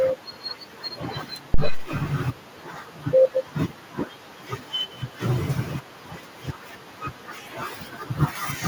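At 1.54 s a phantom power thump appears: a supply switched on or off on the live input sends a voltage step through the coupling capacitors, giving a deep thud at about -7 dBFS that decays within 89 ms. Unlike a plosive, it has no breath noise.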